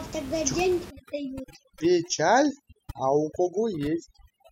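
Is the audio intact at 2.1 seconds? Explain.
No. From 0.90 s to the end, overdone noise removal is at work: a noise reduction stage set far too aggressively pulls individual frequency bands down or shuts them off whenever their level falls close to its noise estimate, and the softer parts of the speech are cut along with the room noise, which sat about 15 dB below the speech. At 2.1 s the background drops and is flecked with twinkling specks.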